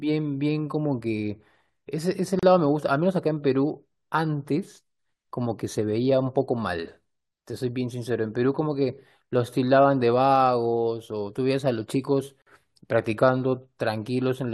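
Right through the speech there's a block size mismatch (truncated): block ends get discarded, giving a steady buzz near 46.9 Hz, which fits 1024-sample blocks at 48 kHz, with pacing unchanged. Then come gaps at joins of encoded pieces, at 2.39 to 2.43 s (35 ms) and 12.42 to 12.47 s (48 ms), ten seconds apart. Leftover encoder delay and padding open short, smeared silences before the speech resumes where it stopped.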